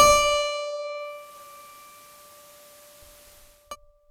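At 0.92 s the music shows digital radio blending to analogue: the receiver loses its digital signal and cross-fades over about 0.45 s to FM. Level shifts about 2 dB, and hiss sits roughly 25 dB down until 3.76 s.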